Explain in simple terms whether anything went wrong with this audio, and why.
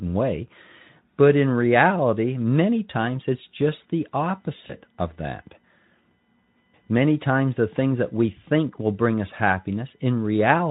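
USB whine starts at 3.72 s, just after "reality many times it's", and runs to the end. The USB connection draws power in bursts a thousand times a second, and that electrical ripple leaks into the audio as a faint, steady 1 kHz whine. Its strongest part sits very high, near 20 kHz.

VoIP packet loss concealed by the speech codec occurs from 4.68 to 4.76 s. A short piece of audio, which fits one lost 20 ms packet, never arrived. The decoder guessed the gap by stretching the sound just before it, so that moment is briefly smeared out and fades before recovering.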